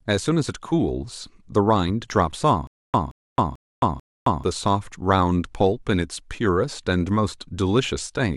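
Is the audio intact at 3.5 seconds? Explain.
No. At 3.5 seconds the speech is caught in a stutter with silent gaps running from 2.67 to 4.44 s. A fragment of about 173 ms plays, then 268 ms of dead digital silence follows, repeating four times at an even period of about 441 ms. This is likely a playback or stream stall in which each retry replays the last buffered fragment and then runs empty, so the speech that belonged in this span is lost.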